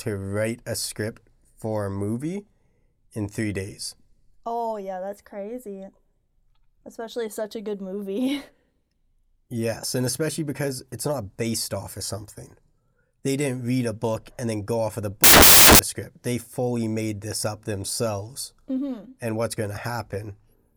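At 15.24 s, just after "go off of the", samples built from the wrong bytes turn the speech into loud, harsh broadband noise for about 0.55 s.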